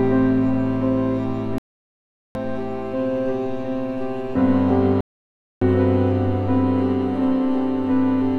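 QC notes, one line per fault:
1.58–2.36 s and 5.01–5.62 s, digital broadcast dropout: the music mutes for about 0.77 s, then 0.61 s, as the receiver silences corrupted frames; the skipped passages never return.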